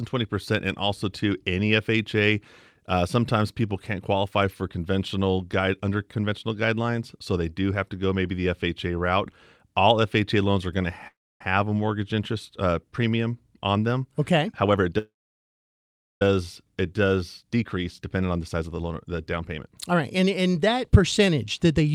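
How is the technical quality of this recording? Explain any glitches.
The recording has two kinds of network-related glitch: two freezes and two stretches of sped-up playback.

The call audio freeze happens twice. The likely cause is packets stalling in transit until the jitter buffer ran dry. The first comes at 11.07–11.41 s, after "loans are going to" and before "a mortgage interest uh". The receiver stretched the last sound into a brief fading buzz, then about 0.27 s of silence. A longer freeze follows at 14.98–16.22 s, with roughly 1.1 s of near-silence. Both insert gaps (0.33 s and 1.23 s) without losing any of the speech.

Jitter buffer speed-up follows when delayed audio arrived in a burst and the receiver trimmed pitch-period slices to shed the excess delay. At 14.49–14.92 s, after "uh premium on them", playback runs at 147% speed, dropping about a fifth of a second, and sounds noticeably hurried. 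From 17.42 to 21.89 s a milder 108% rush removes roughly 0.4 s at unchanged pitch.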